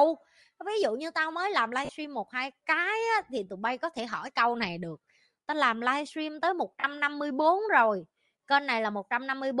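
A breathy, grainy edge runs through the whole speech clip, with noisy, thin upper frequencies, most likely from Bluetooth LC3 compression at a modest bitrate, consistent with about 48 kbps. At 1.85 s and again at 6.80 s the sound briefly turns into a noisy smear lasting about 40 ms. These are lost LE Audio frames, which fits four missing 10 ms frames that the decoder papered over by reusing the last spectrum with scrambled signs.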